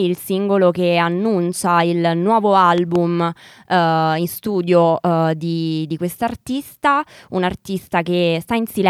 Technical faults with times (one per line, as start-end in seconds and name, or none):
2.78-2.98 loud pop